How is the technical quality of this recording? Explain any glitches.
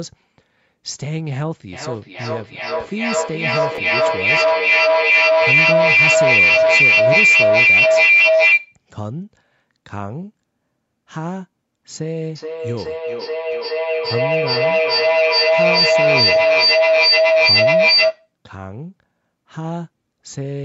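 The recording has serious technical faults: two long stretches of feedback howl in this speech clip, plus a brief Bluetooth stutter inside the first one.

From 1.72 to 8.82 s, and again from 12.35 to 18.35 s, there is feedback howl. A microphone hears a loudspeaker in the same room carrying the same call, and each pass round that loop comes back louder. The repeats narrow onto whichever frequency the loop favours, here roughly 2 kHz the first time and roughly 700 Hz the second. The tone peaks about 12 dB and about 11 dB above the speech. It pulses about every 0.4 s, the loop's round trip. This separates it from an echo that fades: the howl grows instead of dying away.

From 3.76 to 3.78 s, a Bluetooth stutter occurs. About 27 ms of audio went missing, which fits two packets lost on the wireless link. The receiver filled the gap by replaying its last short slice, giving a quick mechanical buzz. 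The speech then picks up further on, as though it had kept playing. Unlike a dropout, there is no silence, and unlike the howl, there is no growing tone.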